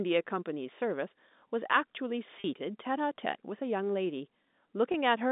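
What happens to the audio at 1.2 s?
Nothing goes wrong at 1.2 s; the speech carries on intact through that moment, with only the narrow telephone band of the G.711 line shaping its sound.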